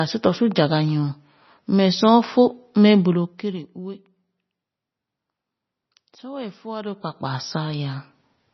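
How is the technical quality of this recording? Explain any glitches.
Poor: heavy codec damage runs through the whole speech clip. From start to end the sound is dull and watery, with nothing above 5.9 kHz. This is likely MP3 compression at a very low rate, which fits about 24 kbps. Short of bits, the encoder cuts the treble and drops weak frequency lines frame by frame, so s sounds swirl and chirp. A spectrogram shows a hard ceiling at 5.9 kHz with flickering, speckled gaps below it.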